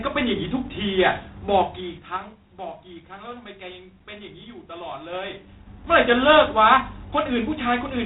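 Throughout the speech, G.726 ADPCM coding, which fits a 24 kbit/s rate, adds a harsh rasping hiss that rises and falls with the voice. On a spectrogram, energy stops sharply at 3.9 kHz, with grainy noise filling the band beneath, and it tracks the speech's level changes.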